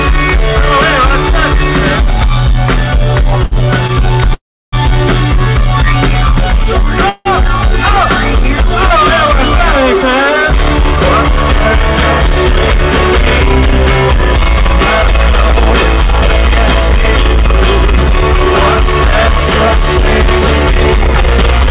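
At 3.44 to 3.53 s and again at 3.87 to 3.91 s there is a short stall from a late packet. In each case a packet had not arrived when it was due, so the jitter buffer ran dry and the receiver stretched the last stretch of sound to cover the wait: about 72 ms the first time and 16 ms the second. The audio then resumes exactly where it left off, with nothing lost. These are heard as a sound held slightly too long, with a faint buzzy smear or dip at the hold.

From 4.33 to 4.74 s the audio freezes. A brief buzzy continuation of the last sound fades into about 330 ms of silence, and the audio picks up again after roughly 390 ms of inserted time, with nothing missing. The same thing happens, more mildly, at 7.09 to 7.27 s, where about 160 ms is filled without ever dropping to silence. Both are most likely call audio freezes, caused by packets held up in transit until the jitter buffer emptied.

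From 14.15 s to the end the jitter buffer speed-up is at work. The buffer was holding more audio than its target delay, so the receiver trimmed short pitch-period-length slices again and again to catch up, removing roughly 150 ms in total. This makes the audio play at about 102 % speed with unchanged pitch. Throughout, the G.711 mu-law call path keeps everything below 4 kHz.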